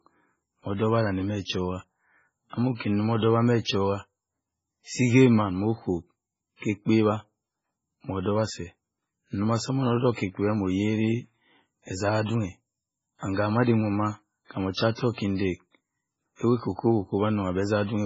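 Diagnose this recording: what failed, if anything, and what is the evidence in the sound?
Codec stage: likely heavy MP3 compression, fitting about 16 kbps, cuts everything above 7.6 kHz and zeroes weak lines, so the speech sounds watery throughout.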